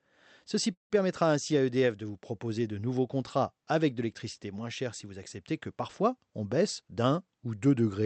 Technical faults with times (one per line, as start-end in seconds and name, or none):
0.73-0.93 call audio freeze
6.40-7.12 jitter buffer speed-up